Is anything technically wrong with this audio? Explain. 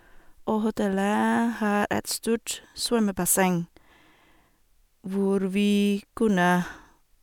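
No, nothing technically wrong can be heard here.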